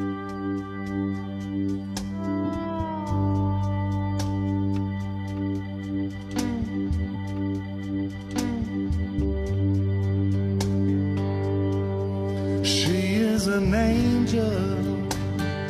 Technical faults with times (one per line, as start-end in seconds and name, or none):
7.11-9.11 stream segment repeated